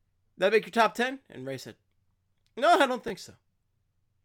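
At about 3.08 to 3.10 s, just after "I don't", the speech shows chunks out of order: one 10 ms block of audio was delivered or written one chunk late, so it plays after the block that should have followed it. No audio goes missing, but the two blocks swap places, leaving three abrupt joins within about 20 ms. The result is a brief scrambled flicker in the sound, heard as a quick jumble.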